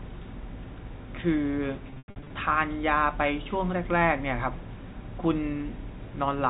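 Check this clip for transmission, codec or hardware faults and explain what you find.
One transmission fault is audible, a burst of packet loss concealed by pitch repetition, carried over a G.711 telephone path whose 4 kHz band limit is evident throughout.

From 1.90 to 2.30 s, packet loss with pitch repetition removes 260 ms of audio in gaps scattered across 400 ms, which fits 20 ms packets. The receiver fills each gap by repeating the last pitch period. The shorter gaps sound like a briefly held, buzzy tone. The longest, 100 ms, outlasts the roughly 50 ms fade, so it drops to silence before speech cross-fades back in.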